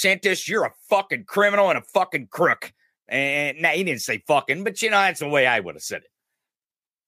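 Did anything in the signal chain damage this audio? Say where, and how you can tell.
No, nothing in the signal chain damaged this audio.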